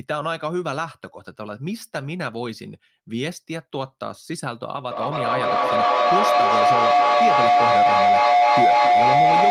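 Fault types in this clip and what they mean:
Feedback howl: a microphone picks up its loudspeaker, so each trip round the loop returns louder. From 4.91 s to the end, a tone near 700 Hz swells over the speech. The loop repeats about every 0.3 s, and the howl peaks about 10 dB above the speech.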